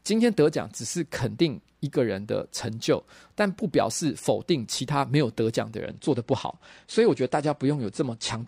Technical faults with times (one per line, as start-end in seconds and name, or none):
5.84-8.47 adaptive stream at a lower bitrate